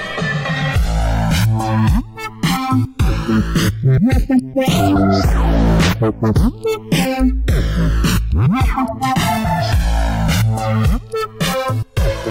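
From start to finish the two channels are drifting apart: they appear to come from devices running on separate clocks, mismatched by a few hundred parts per million, so the delay between left and right keeps sliding, reaching around 2 ms by the end. Heard summed to mono, the comb-filter notches this creates sweep slowly through the spectrum, giving the sound a gradual, hollow flanging that moves steadily across the whole clip.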